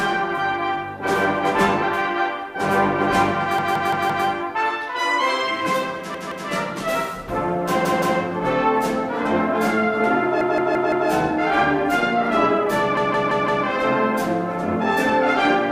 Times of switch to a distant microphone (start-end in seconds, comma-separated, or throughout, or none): none